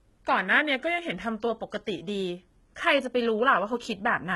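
A speech recording that has likely passed through HE-AAC compression, with heavy codec damage consistent with a very low bitrate around 16 kbps. The encoder kept only the lower spectrum and synthesised the top by copying lower bands upward under a coarse envelope, so the rebuilt treble does not match the real harmonics. Nothing is present above about 11.8 kHz, and sibilants come out gritty, metallic or lispy. Separately, from 0.47 s to 1.47 s a clock-matching drift correction step likely changed the playback rate in a single jump, slowing the audio by 5.68 percent. Speed and pitch drop together by 101 cents, roughly a semitone, so that second of speech sounds suddenly detuned and sluggish before returning to normal speed and pitch at 1.47 s.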